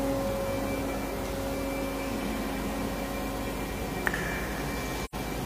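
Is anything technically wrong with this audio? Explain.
Yes. Near the end, from about 5.05 to 5.15 s, the sound fades quickly to silence and then fades back in, leaving a short hole of roughly 0.1 s with softened edges. This is AAC frame loss with muting. The decoder received no data for that stretch and filled the missing frames with a zeroed spectrum. The overlapping transform windows smooth the cut into a fade on each side. The length of the gap fits two lost frames.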